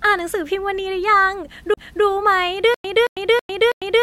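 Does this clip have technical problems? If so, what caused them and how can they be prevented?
Yes. At 1.74 to 1.77 s there is a CD skip. The laser was knocked or hit a flaw and landed on another turn of the disc's spiral, so the player muted for about 30 ms, leaving a tick, and resumed from a different point in the speech, jumping forward or back by one or more disc turns. Unlike a stutter, nothing repeats: it is a single cut where the flow of the speech simply breaks off and continues elsewhere. Playing clean, undamaged discs on a stable, vibration-isolated player with anti-skip buffering prevents this.

From 2.74 s to the end there is a stutter with silent gaps. The same 0.22 s burst returns every 0.32 s with about 0.10 s of digital silence between repeats, and the speech that should have followed is lost. The likely cause is a player or stream stalling, replaying its last fragment on each retry, then running dry. 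What separates it from a CD skip is the strict, even repetition of identical material with true silence in between, rather than one jump. A larger playback buffer and a reliable source connection or storage prevent it.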